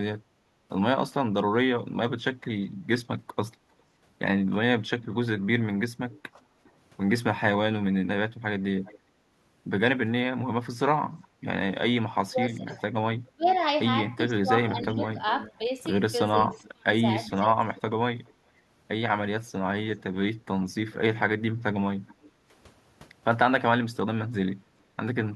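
Echo leak appears from 5.02 to 6.69 s: a faint delayed copy of the speech, about 400 ms behind and roughly 25 dB down, trails the talker. The far end was likely on a loudspeaker whose echo canceller let part of its microphone pickup escape and sent it back. A brief return follows at 8.85 to 8.99 s with the same delay. From 11.22 to 22.29 s the leak becomes a long stretch, about 410 ms late and only about 15 dB below the speech.

Speech suppressed in double talk comes first at 6.34 to 6.39 s, a quick dip of up to about 15 dB lasting around 50 ms, while the leaked echo overlaps the talker. Unable to tell the local talker from the loudspeaker return, the canceller likely turned everything down. From 12.24 to 17.57 s this happens again, with the speech ducking at worst around 30 dB, adding up to roughly a second of lost level.

Background gated by the echo canceller follows at 22.29 to 22.47 s, right as the long echo stops. 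The room tone drops about 7 dB for around 200 ms because the canceller clamped the microphone while the loudspeaker was active, and the ambience returns once it releases.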